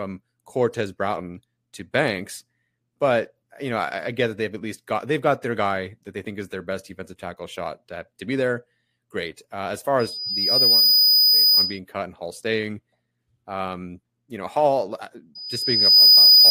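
Loudspeaker feedback squeal at 9.99–11.79 s, after "as far" and before "cut and", and again from 15.35 s to the end: a 5 kHz loop tone swells within about a second to roughly 10–15 dB above the speech, a bright horizontal spectrogram line over a thickening waveform.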